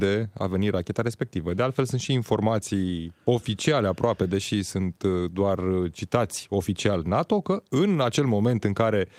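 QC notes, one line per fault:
0.77 s and 4.23 s: lost packet rebuilt from error correction. Right after "a venit" and between "și informații oficiale aproape" and "deși sunt uh doar", a 20 ms stretch turns briefly rougher and noisier without a gap. This fits a single lost packet replaced by the low-bitrate backup copy carried in the next packet.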